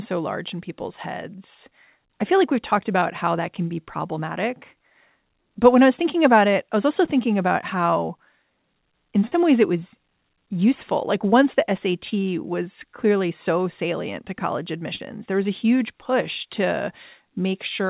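At 3.0, 7.05, 9.27, 12.09 and 14.96 s, short concealed packet loss drops 20 to 40 ms of audio, which the receiver patches by extending the preceding sound, leaving brief smears or wobbles, over a band that stops at 4 kHz.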